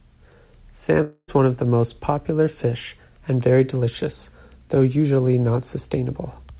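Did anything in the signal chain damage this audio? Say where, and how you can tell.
Yes, at the network stage. From 1.02 s to about 1.30 s the speech breaks off: the last sound carries on as a fading buzz for roughly a quarter of a second, drops to near-silence for about 60 ms, and then the speech resumes with the intervening part gone. That points to a likely long network dropout, with the receiver's concealment stretching the final received audio over the gap. The 4 kHz band limit fits a G.711 call path.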